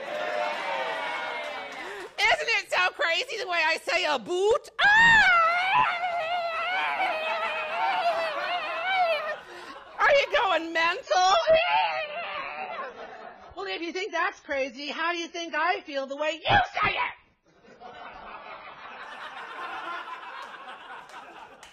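From 11.03 s to 19.03 s the audio shifts abruptly to an adaptive stream at a lower bitrate, consistent with AAC falling from around 96 to 16 kbit/s. Nothing remains above 7 kHz and artefacts thicken. Unlike a dropout, there is no gap, and unlike steady filtering, full quality snaps back.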